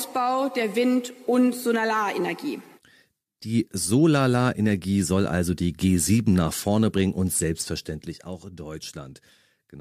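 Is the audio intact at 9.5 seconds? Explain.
Yes, the audio is intact at 9.5 seconds, with no fault present at that moment.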